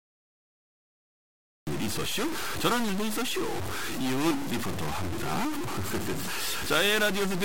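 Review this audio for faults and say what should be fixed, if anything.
The capture began late. The first 1.67 s are digital silence, and the speech then starts abruptly at 1.67 s, mid-sound, with no natural attack or fade-in. That is the signature of a cut-off start: the recorder or stream armed after the talker had already begun, so the opening of the utterance is missing. To prevent it, start recording with a pre-roll of a second or two before anyone speaks.

Throughout all 7 s there is distortion on the speech, and the pauses are not clean but filled with a noise floor that should not be there. The likely cause is a stuck bit: one data line or converter output fixed at 0 or 1, so roughly half the samples land off by that bit's weight. The error also flips with the sign of quiet samples, which turns silence into noise. To prevent it, test the converter and its data wiring with a known signal and repair or replace the failing part.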